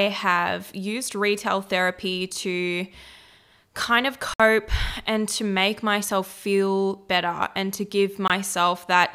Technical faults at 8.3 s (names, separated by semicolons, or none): Bluetooth stall